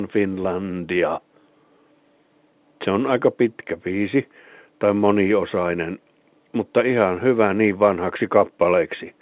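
Nothing goes wrong anywhere in this speech clip, which simply carries the usual narrow telephone sound of A-law G.711 coding, with everything above 4 kHz gone and a faint hiss that rides along with the level.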